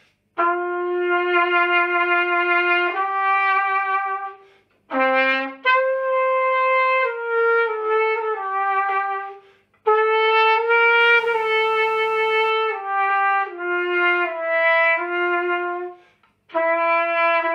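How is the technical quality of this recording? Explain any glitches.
The recording has one clear glitch: mains buzz from 11.00 to 12.50 s. Something in the signal chain, such as a dimmer, a rectifier or an unshielded cable, picked up sharp switching spikes locked to the 60 Hz supply, firing twice per cycle. Those spikes carry a dense stack of 60 Hz harmonics reaching into the kilohertz range, so the interference comes through as a steady, raspy buzz sitting roughly 35 dB below the sound for that second and a half, then stopping.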